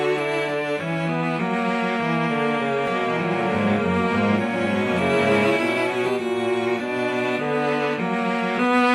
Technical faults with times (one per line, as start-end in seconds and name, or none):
2.87-6.09 doubled audio track